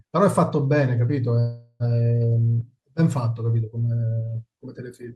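From 1.39 to 1.83 s the speech stalls into a fading buzz about 0.41 s long, then resumes exactly where it stopped, with nothing lost but everything after arriving that much later. This call audio freeze likely came from delayed packets draining the jitter buffer.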